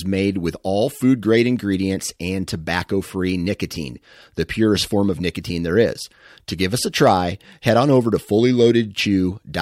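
No technical faults can be heard anywhere in the speech recording.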